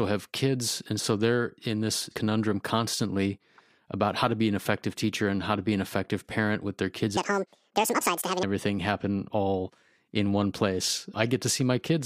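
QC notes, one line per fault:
7.17–8.43 s, section at the wrong speed: after "parent with their kids" the speech runs 1.86 times too fast, about ten semitones higher, until "happen all", likely from a clock mismatch. A spectrogram shows harmonics shifted upward and syllables compressed; the waveform looks squeezed.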